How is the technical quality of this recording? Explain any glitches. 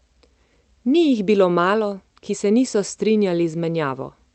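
The technical quality holds up, with no glitches to explain in this recording.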